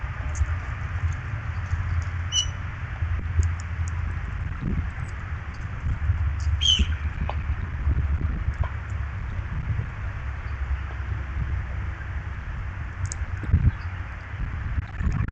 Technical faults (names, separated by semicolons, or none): corrupt frame decoded